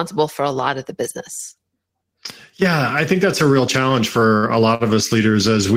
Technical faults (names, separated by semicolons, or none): short stall from a late packet